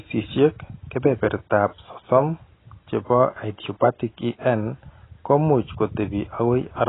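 AAC compression, heard across the whole clip from start to finish, most likely from AAC-LC coding at a very low bitrate; the heavy damage fits something around 16 kbps. To save bits, the encoder has discarded everything above about 3.9 kHz and quantised the remaining spectrum coarsely, so the speech sounds dull and muffled, with a smeared, warbling texture on sustained sounds and a fizzy, hollow quality where sibilants should be crisp.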